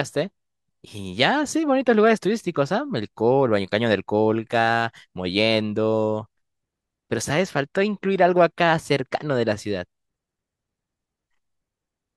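Listening through the speech, nothing stood out as a technical problem at any point.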